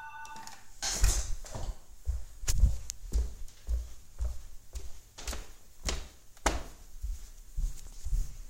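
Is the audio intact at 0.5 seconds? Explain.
Yes, at 0.5 seconds the audio is intact, with no fault audible at that moment.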